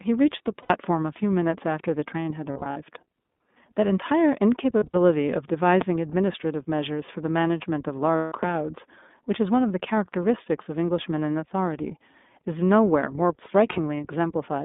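The speech has passed through the iLBC codec, whose 20 ms frames and rough timbre fit its 15.2 kbps mode. The line passes only about 200 Hz to 3.6 kHz, so nothing above 4 kHz survives. The codec damage is plainly audible: the voice sounds thin, slightly rough and synthetic throughout.

Packets go missing first at 0.63 to 0.71 s, a gap of 80 ms, which points to four lost iLBC frames. The decoder covers each gap by repeating the last pitch cycle mixed with noise, so the voice briefly turns into a held, faintly buzzy vowel. Because each frame decodes on its own, it snaps back almost immediately. Losses then scatter across 2.52 to 2.78 s, 160 ms of gaps spread over about 240 ms, with runs of around 40 ms at most. This gives a stuttering, breathy smear. A similar scattered patch follows at 4.78 to 4.96 s, 100 ms lost over 160 ms.

A loud pop strikes at 5.81 to 5.84 s, a single sharp transient about 15 dB above the speech, which carries on underneath. 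It is likely a voltage step from a plug, switch or driver glitch.

Frames drop again at 8.16 to 8.32 s. This single 160 ms gap is the longest, so the held buzz fades over it. A second loud pop follows at 8.43 to 8.45 s, about 10 dB above the speech. Two brief frame losses close the clip: 20 ms at 11.82 to 11.85 s and 40 ms at 13.72 to 13.79 s.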